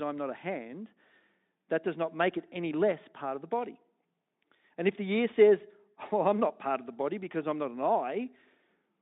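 No technical faults can be heard in the recording. The speech carries the narrow band of a Speex link, from about 150 Hz up to 3.7 kHz, and any coding coloration is faint at most, which fits a fairly generous setting of around 18 kbps.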